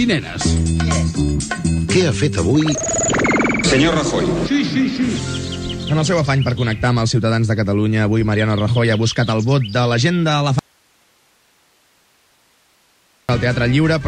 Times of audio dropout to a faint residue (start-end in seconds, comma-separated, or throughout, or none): 10.59-13.29